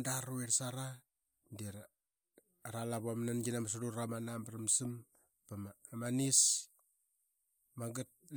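No technical faults can be heard anywhere in this recording.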